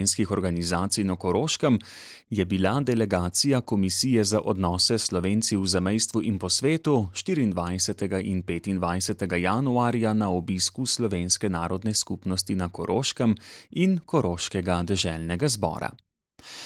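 No technical faults are present in this speech clip, whose Opus voice coding at 24 kbps keeps the full audio band with only light coding traces.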